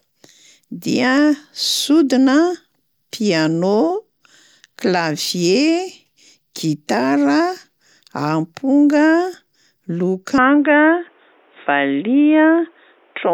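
At 10.38 s the speech abruptly turns duller and boxier and stays that way to the end: nothing above 3.8 kHz survives, and a faint new background noise appears, roughly 40 dB under the speech. This is most likely an input switched to a poorer device. The loudness barely changes and there is no gap at the switch. What separates it from a simple low-pass filter or codec bandwidth drop is the new noise floor and changed tone arriving together.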